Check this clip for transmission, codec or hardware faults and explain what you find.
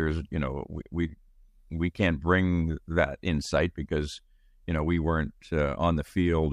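Listening through the recording, nothing stood out as a transmission, codec or hardware problem.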